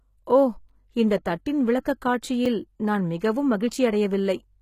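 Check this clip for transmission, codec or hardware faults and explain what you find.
Two faults are present: codec damage throughout the speech and two brief dropouts.

HE-AAC compression, throughout: the treble is likely rebuilt by band replication above a coded low band, which fits roughly 20 kbps. The s sounds turn gritty and metallic, with nothing above 14.9 kHz.

Block of digital silence, at 0.69 s before "இந்த தட்டின்" and at 2.46 s before "நான் மிகவும்": each time, the sound cuts out for 5 ms with no fade, so each gap is heard as a tick or dip.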